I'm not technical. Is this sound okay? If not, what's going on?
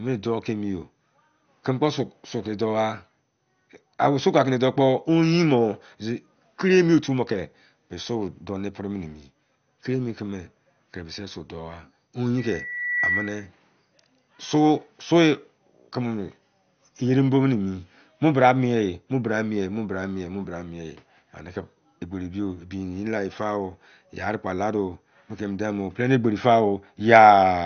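No. Two things are wrong with this speech recording.

Throughout the clip, the audio was squeezed hard to save space, most likely by MP2 compression, the format used for low-rate digital radio. That system gives up on the highest sounds first, so nothing above about 6.5 kHz survives, and what remains is stored roughly. The voice sounds dull and muffled, with a clearly audible gurgling, grainy roughness clinging to it the whole way through.

From 12.37 to 13.50 seconds there is a loudspeaker feedback squeal. A microphone picked up the loudspeaker it was feeding, and the sound went round that loop, growing louder each time at one pitch. You hear a single piercing tone at about 2 kHz, a high whistle, swelling up in under a second until it is roughly as loud as the speech, then stopping.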